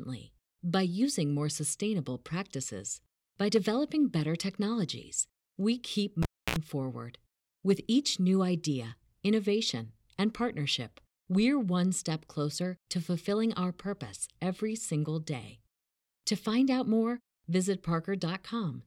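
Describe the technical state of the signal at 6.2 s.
At 6.2 s the speech hits a cable pulled and plugged in, running from about 6.23 to 6.56 s. A live lead comes out of its socket with a pop, leaving near silence for roughly 0.29 s. As it goes back in, the tip touches before the connector seats, so there's a 62 ms burst of 60 Hz mains buzz. Then a second pop lands as the signal snaps back.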